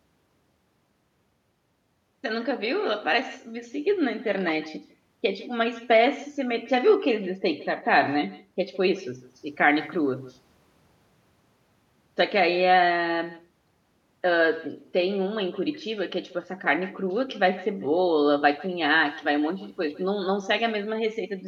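From start to finish, the speech carries an echo with no canceller. The far end is evidently playing the call through a loudspeaker, its microphone is picking that playback up, and no echo cancellation strips it out before it returns. Each phrase is followed roughly 150 ms later by a second copy sitting about 19 dB below the direct sound, thinner, giving a persistent doubled tail behind everything said.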